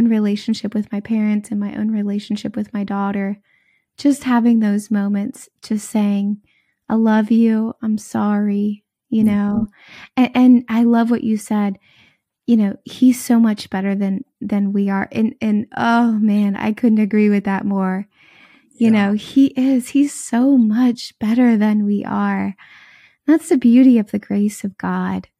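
No technical faults can be heard anywhere in the recording.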